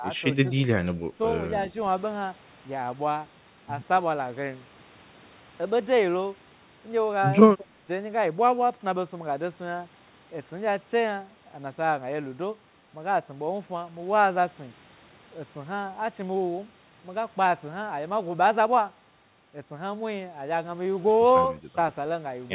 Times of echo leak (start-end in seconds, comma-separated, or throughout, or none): 0.17-0.21